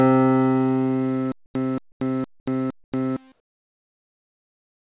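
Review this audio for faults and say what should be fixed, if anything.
Stutter with silent gaps runs from 1.32 to 3.17 s. A 228 ms fragment plays four times, each followed by about 233 ms of digital silence, giving an even 461 ms cycle. This is likely a stalled player or stream that replays its last buffered fragment on each retry and then runs dry. The audio that belonged in that span is lost. To prevent it, increase receive buffering and conceal underruns instead of replaying stale data.

Comfort noise in place of the background appears as three 80 ms patches at 1.46, 1.92 and 2.84 s, each about 12 dB louder than the surrounding background. It also replaces the final 1.54 s, from 3.32 s to the end, where the noise sits about 21 dB lower. The real background, about 34 dB below the loud passages, is replaced by a smoother noise of a different tone. The likely cause is discontinuous transmission, with the receiver generating noise during pauses. 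To prevent it, disable DTX or calibrate comfort noise to match the measured background level and spectrum.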